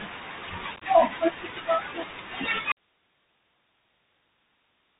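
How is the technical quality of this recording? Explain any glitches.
The recording is poor, with three problems.

Throughout, the speech carries Bluetooth CVSD headset codec damage that is plainly audible. The link samples one bit at a time at 64 kbps with an adapting step, so nothing above 4 kHz survives. A granular hiss sits underneath, and s sounds turn scratchy. Unlike simple low-pass filtering, loud bright sounds also distort.

From 0.76 to 0.83 s there is unconcealed Bluetooth headset packet loss. About 37.5 ms of audio goes missing in bursts spread over 52.5 ms, the longest run 18.8 ms. That fits roughly ten lost packets. Nothing fills the holes, so they sound like a brief, edgy crackle rather than one clean gap.

At 2.72 s the speech cuts out abruptly and never returns. This is an audio dropout to a faint residue. Only hiss remains, about 40 dB below the speech, which shows the path downstream stayed live. 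The likely cause is that the wanted signal was lost. Unlike a pause or a fade, the change is instant.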